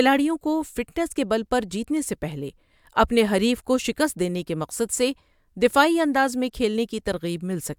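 No faults can be heard anywhere in this speech recording. Nothing in the sound points to a break, glitch or distortion at any moment.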